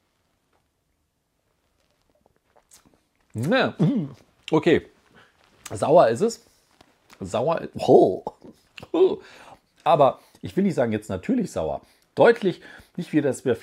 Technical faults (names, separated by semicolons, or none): none